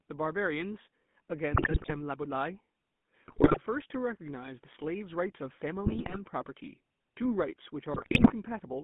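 Throughout, the speech has passed through the GSM full-rate codec. It rebuilds the voice from a vocal-tract filter driven by a coarse, regularly spaced pulse excitation, and the line passes only about 150 Hz to 3.5 kHz. The result is a plainly audible buzzy, gravelly roughness over every syllable, with a thin, band-limited tone consistent with a 13 kbps full-rate link.

Four bursts of GSM bit errors follow, at 1.52 to 1.95 s, 3.28 to 3.58 s, 5.85 to 6.18 s and 7.94 to 8.33 s. In each, corrupted bits reach the decoder and scramble the filter, pitch and gain values for a run of frames, which points to a few percent of bits flipped. The voice breaks into squawks, pops and gargling for roughly a third to nearly half a second at a time.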